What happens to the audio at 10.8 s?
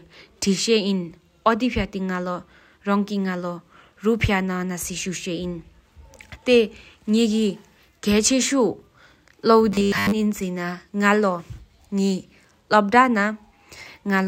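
Nothing goes wrong at 10.8 s: the speech continues intact through that moment, with no dropout, click, distortion or other fault.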